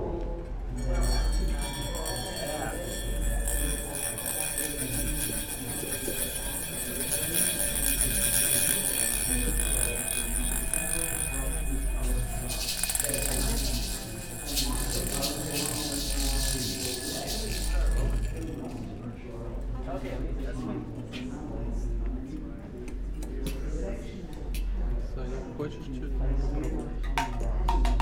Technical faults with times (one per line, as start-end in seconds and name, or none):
4.30-4.32 loud pop